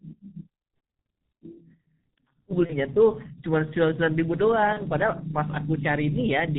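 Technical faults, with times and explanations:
Throughout: G.723.1 codec. The speech is muffled and hoarse, with nothing above 4 kHz and smeared consonants. The damage is heavy and fits the 6.3 kbit/s mode. Its voice model updates only every 30 ms frame, so quick sound changes blur together.
2.66–2.75 s and 4.73–4.82 s: VoIP packet loss concealed by the speech codec. Each gap sounds like a single lost 30 ms frame. The decoder repeated its last pitch and filter at falling gain, giving a brief buzzy or noisy, fading smear. The voice stays weak for a moment after each gap.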